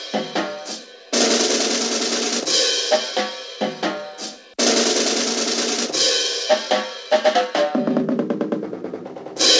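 Nothing here goes wrong: the audio carries the coding texture of a call path, with nothing above about 8 kHz, which fits a wideband codec such as G.722 at 64 kbps, and no fault turns up anywhere along the way.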